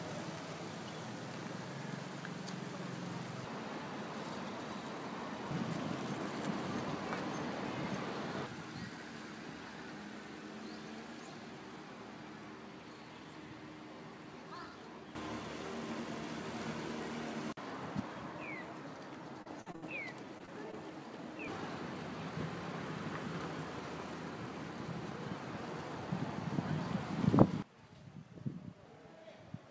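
Choppy sound runs from 19.42 to 19.84 s, broken by four short holes, the longest about 64 ms, with roughly 38% of that stretch synthesised rather than real. This is repeated packet loss: audio packets kept arriving too late or not at all, and each time the receiver stretched the last good sound to cover the hole. The patches follow one another too closely to blend in, so the sound turns choppy and pieces go missing.

Three brief smears or wobbles follow at 20.38 to 20.42 s, 20.46 to 20.49 s and 20.71 to 20.75 s. Each is a short concealed packet loss, with about 20 ms of audio that never reached the decoder in time. The receiver bridged each gap by extending the preceding sound, using its pitch where there was one and shaped noise where there wasn't, then faded back into the real signal. Around these spots, a short, sharp sound can be lost entirely.

All of this passed through a G.722 call path, which fits the absence of any content above 8 kHz.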